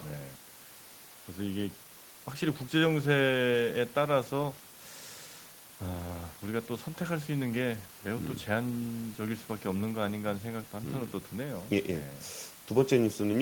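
No technical faults are audible.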